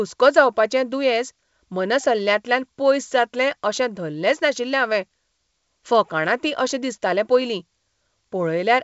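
No technical faults can be heard anywhere in the speech. The G.722 wideband telephone coding is working as intended, carrying the sound up to about 7.7 kHz with nothing above that, and any coding damage is faint at most.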